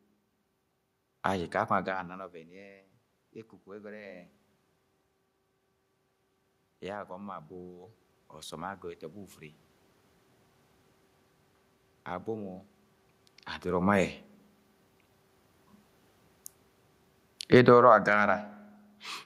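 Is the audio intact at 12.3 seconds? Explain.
Yes, the audio is intact at 12.3 seconds, with no technical fault at that moment.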